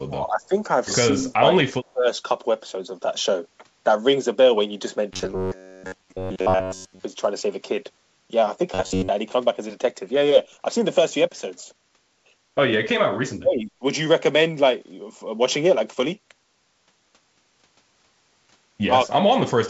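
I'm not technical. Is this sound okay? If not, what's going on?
No. Four times, at 0.05 to 0.53 s, 1.12 to 2.07 s, 12.79 to 13.82 s and 19.05 to 19.44 s, the speech dips or drops out in pieces. This is likely speech suppressed in double talk: both sides spoke at once, and the echo canceller mistook this talker for echo and turned them down.

From 5.13 to 7.04 s and 8.74 to 9.09 s, fresh audio stopped arriving often enough. The software filled the gaps by replaying tiny slices of about 11 ms, which produces a rigid, metallic buzz near 94 Hz. That is likely robotic sound from repeated short buffers.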